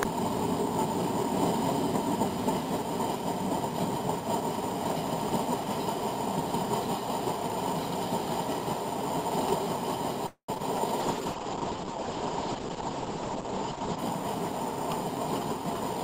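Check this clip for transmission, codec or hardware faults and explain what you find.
Five faults affect the clip's second half, from 10.26 s to about 14.2 s.

Long network dropout, 10.26 to 10.58 s: the sound decays into a fading buzz and then about 100 ms of silence, likely from a stalled stream. Unlike brief concealment, it ends in real silence.

Short concealed packet loss, 10.58 to 10.62 s: a 20 ms hole is filled by extending the preceding sound, leaving a tiny smear. It is far shorter, with no silence.

Call bitrate drop, 11.01 to 14.05 s: the encoder falls from 48 to 10 kbps, and bandwidth narrows from 20 kHz to 8 kHz. The result is muffled and watery.

Jitter buffer slow-down, 11.22 to 11.93 s: repeated pitch periods add 53 ms, so the audio runs at 94% speed. Pitch stays steady, unlike a tape-style slowdown.

Jitter buffer speed-up, 13.72 to 14.23 s: removing about 50 ms of short pieces pushes the audio to 107% speed. 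It sounds hurried at an unchanged pitch, the mirror of the slow-down.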